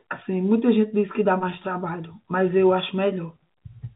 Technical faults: none

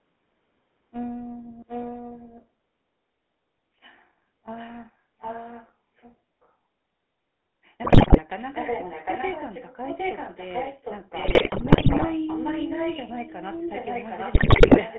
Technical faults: GSM full-rate codec; echo leak; GSM bit errors

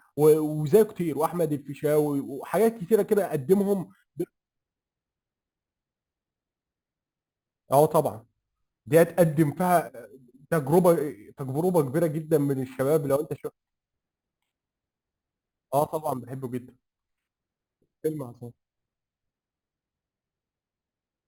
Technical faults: imaging from sample-and-hold upsampling

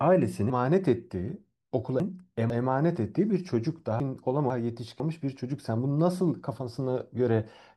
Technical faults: chunks out of order

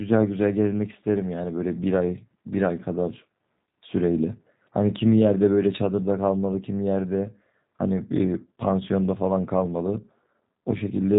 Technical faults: G.729 codec

